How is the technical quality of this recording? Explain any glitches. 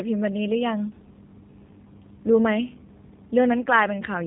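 Technical quality is limited by plainly audible low-bitrate coding throughout. Throughout, G.729 codec coding rebuilds the speech from a vocal-tract model and sparse pulses, which fits 8 kbit/s. It sounds rough and synthetic with nothing above 3.8 kHz, unlike simple band-limiting, which stays smooth.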